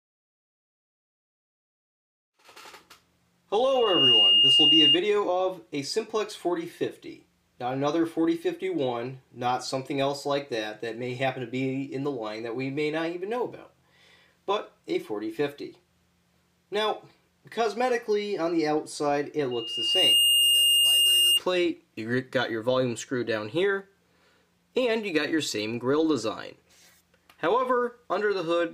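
A single piercing tone near 2.8 kHz swells up in under half a second at 3.64 s and screams until 4.98 s, well above the surrounding sound. It returns from 19.51 to 21.40 s, rising more slowly and less loudly. This is loudspeaker feedback squeal: the microphone picks up its own loudspeaker, and loop gain above unity at that frequency makes it grow.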